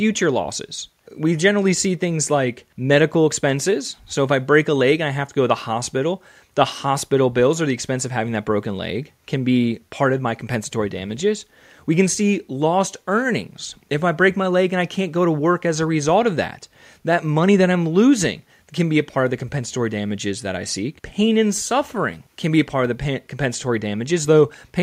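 Nothing in the speech stood out as a technical fault on listening.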